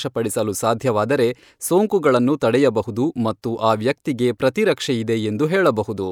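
A speech recording, with nothing technically wrong with it.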